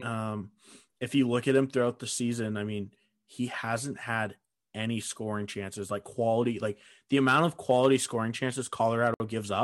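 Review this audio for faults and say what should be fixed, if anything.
At 9.14 to 9.20 s the speech drops to silence for 60 ms, then resumes, likely a Bluetooth stall where delayed packets emptied the headphone buffer. Prevent it by moving away from wireless interference or using a wired connection.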